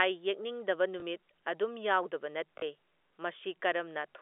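Audio packets went missing twice, and the receiver covered each gap by replaying the last packet it had, a case of packet loss with the last packet repeated. From 1.00 to 1.02 s, just before "ꯑꯗꯨꯝ ꯌꯥꯎꯗꯕ", 20 ms is filled this way, which fits one lost 20 ms packet. From 2.58 to 2.62 s, right after "ꯑꯗꯨꯝ ꯌꯥꯎꯗꯕ", 40 ms is filled, which points to two packets. The longer repeat gives a brief robotic stutter. The band stays limited to about 300 Hz to 3.5 kHz, as expected on a G.711 telephone line.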